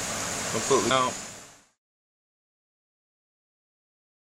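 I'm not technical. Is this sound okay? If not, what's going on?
No, there's one glitch. At about 0.89 s you'll hear a quick glitch, which is damaged data in a compressed stream. A tiny bit of the compressed file got corrupted, so the player couldn't read that moment properly. It lost its place for a split second, then caught up at the next clean chunk, which is why the sound seems to hiccup. The gentle fade-out starting around 1.81 s is deliberate, not part of the problem.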